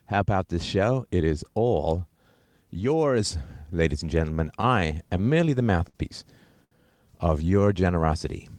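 From 4.61 to 5.96 s the speech has repeated stalls, a stutter. Packets kept arriving late. The receiver filled eight gaps, 122 ms in all, the longest 56 ms.

At 6.64 s a short stall from a late packet holds one sound about 72 ms too long. Nothing is lost. The sound just drags briefly.

From 7.50 to 8.07 s a jitter buffer slow-down adds 55 ms. Speech runs at 92% speed, same pitch, sounding drawn out.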